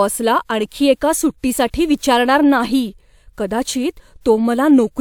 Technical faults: none

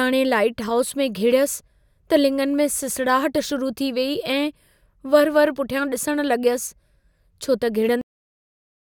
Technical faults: cut-off end

